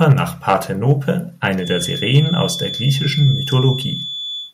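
A harsh, crackling edge breaks up the speech from 0.10 to 0.12 s. It is microphone overload: the input was likely set so high that the peaks ran about 3 dB past the converter's ceiling, and a large share of the waveform in that burst was sheared flat. The same gritty tearing returns from 0.48 to 0.54 s, again about 3 dB over but with only a small fraction of the peaks flattened, and once more from 2.15 to 2.20 s, about 1 dB over, with a few percent of the peaks cut.

Right after the first burst, at 0.12 s, the voice and the room behind it both drop abruptly, by about 4 dB, and stay at the lower level. The microphone volume was stepped down: the call software likely reacted to the clipped peak by cutting the device's input gain in a single jump instead of a gradual fade.

From 1.56 s to the end, a thin, steady whistle at 3.4 kHz sits about 10 dB below the speech, swelling and fading slowly in level but never building into a howl. 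It is a feedback whistle, and the likely cause is the path from loudspeaker back into microphone hovering at the edge of feedback. That lets one frequency keep ringing without running away into a full howl.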